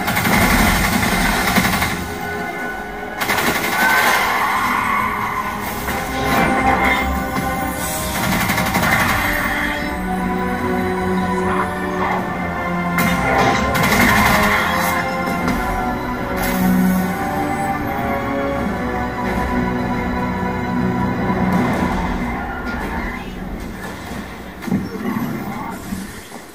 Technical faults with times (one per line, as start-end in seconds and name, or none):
none